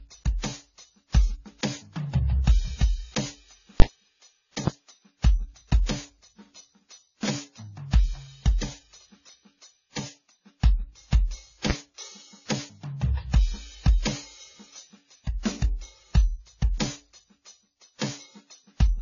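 Throughout the music, the audio was likely passed through several lossy codecs in turn, the first at a very low bitrate, so their smeared, watery artefacts stack up and nothing remains above 7 kHz. At 3.80 to 3.82 s, a calculation produced invalid numbers at full scale, pinning a 20 ms block to maximum level, which is heard as a single hard bang. At 4.67 s, a single loud pop sits roughly 15 dB above the music, which continues underneath; the likely cause is a sudden voltage step or glitch in the signal chain.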